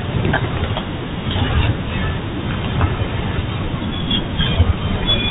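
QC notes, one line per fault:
Throughout: Bluetooth CVSD headset codec. The speech is squeezed into a narrowband headset channel with nothing above 4 kHz, so it sounds dull and boxy. The one-bit delta coding, which fits a 64 kbps link, can't track loud, fast rises, giving scratchy sibilants and granular hiss under the speech.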